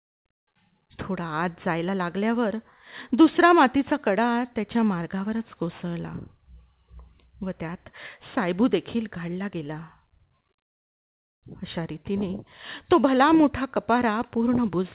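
No faults can be heard anywhere in this speech recording.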